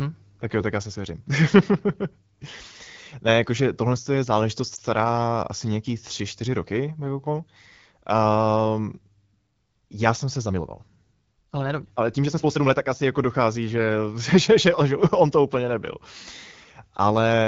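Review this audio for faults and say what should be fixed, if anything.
Lost AMR speech frames at 4.75 to 4.79 s, right after "jakože tohle je záležitost": there is a brief dip and warble, consistent with a single 20 ms speech frame that failed its checksum. The decoder filled the gap by repeating the previous pitch and vocal tract settings at reduced gain, and the sound recovers weak or rough for a moment. Unlike a plain dropout to silence or a click, the gap is filled with a smeared continuation of the preceding sound. It sits on top of the light, clean-sounding coding of the AMR wideband (HD Voice) codec, at a rate that fits 12.65 kbit/s. Preventing it means improving the radio link or adding error protection so that frames arrive intact.

Time-stretched section from 10.43 to 12.83 s, between "já jsem se" and "asi jako dochází": the pace abruptly jumps to about 1.39 times normal, sounding rushed, while the pitch stays where it was. 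Likely cause: software compressed this stretch to fit a length by dropping short pieces. Unchanged pitch is what separates this from simply playing the audio faster, which would raise the pitch. It can be prevented by leaving the original timing intact rather than squeezing segments to fit.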